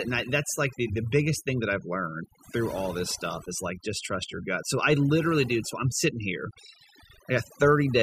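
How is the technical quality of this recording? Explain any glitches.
The recording is marred by overdone noise removal running the whole way through. Denoising set far too strong shuts off each frequency band near its noise estimate, taking quiet speech detail too. The background drops to near-silent gaps with twinkling specks, rather than the hard on-off pumping of a noise gate.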